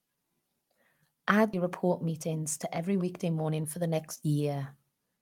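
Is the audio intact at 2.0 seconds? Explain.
No. From 1.63 to 3.64 s the speech runs about 8% fast at unchanged pitch and sounds hurried. This is a jitter buffer speed-up: the receiver, holding excess buffered audio, trimmed short pitch-period slices repeatedly, discarding around 150 ms in total.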